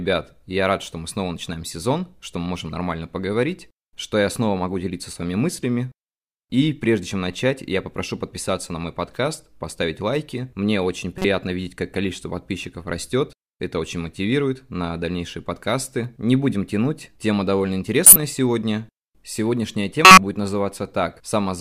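Speech marred by three short glitches: at 11.18–11.25 s just before "видеть как количество подписчиков", at 18.06–18.16 s right after "будем тянуть тема довольно", and at 20.05–20.18 s, the last two the strongest. Each is a corrupt frame decoded: damaged compressed frames played anyway, spraying energy into wrong frequencies.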